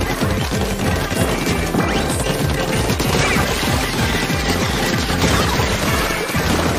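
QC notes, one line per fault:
No faults heard.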